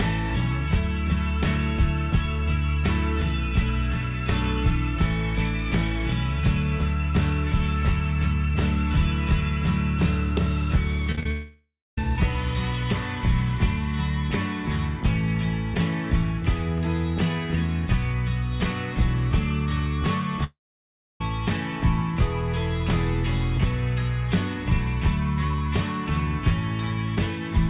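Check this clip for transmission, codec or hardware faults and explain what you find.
Three transmission faults stand out, all network losses; the narrowband call path behind them, with nothing above 4 kHz, fits G.711 mu-law at 64 kbps.

Repeated packet loss (robotic sound), 11.12–11.26 s: four short gaps, the longest 22 ms, arrive in quick succession. Each is patched by extending the previous sound, so more than half of this stretch is concealment, which gives a choppy texture with fragments missing.

Long network dropouts, 11.31–11.98 s and 20.44–21.21 s: a likely stall in packet delivery left the receiver extending the last sound as a fading buzz before it falls silent. That silence lasts about 0.25 s in the first dropout and about 0.65 s in the second. The audio then resumes without the lost portion.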